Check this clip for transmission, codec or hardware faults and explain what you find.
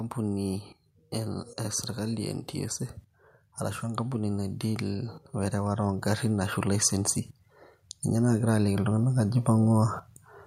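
Two stretches of automatic gain rising are audible. From 3.81 to 7.21 s the level climbs by about 6 dB, and from 8.14 to 9.96 s it climbs again by about 5 dB. In each case the gain control judged the input too quiet and raised its gain step by step, so the speech and the background noise swell together over a second or more. That shared rise is the giveaway: a talker moving closer would get louder against a steady background.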